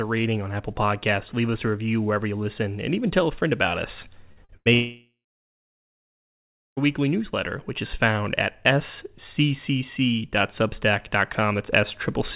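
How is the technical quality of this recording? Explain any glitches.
The recording is marred by a cluster of network glitches between about 4.3 and 6.8 s, all on a call-quality signal whose band stops at 4 kHz, which fits a narrowband telephone codec such as G.711.

Right after "a friend about us", two bursts of packet loss turn the sound into a brief held sound that fades, at 4.32 to 4.40 s and again at 4.57 to 4.69 s. In each, a run of packets was lost or arrived too late. The receiver stretched the last sound for about 47 ms and then about 89 ms, while roughly 40 ms and 80 ms of real audio were skipped.

Between those two bursts, at 4.45 to 4.52 s, there is a quick smear or wobble. This is short concealed packet loss: about 40 ms never reached the decoder, so the receiver continued the preceding sound and blended back into the real signal. Because it is so brief, it passes more as a blur than a gap.

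From 4.74 to 6.80 s the sound trails off into a fading buzz or hiss and then roughly 1.6 s of silence before resuming at "weekly newsletter which is". This is most likely a long network dropout. Over two seconds of audio is gone, and the receiver filled the hole by extending the last sound until the concealment gave way to silence.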